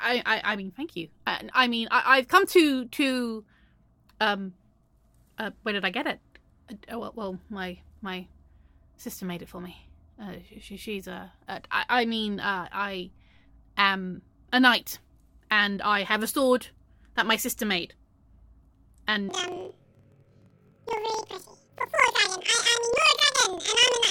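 From 19.29 s to the end at 24.11 s, planar audio read as interleaved puts the sound an octave high with a 23.4 Hz flutter. Each 42.67 ms block, which fits a 2048-sample block, plays its left half then its right half at double speed, so the pace stays right, unlike a sample-rate error.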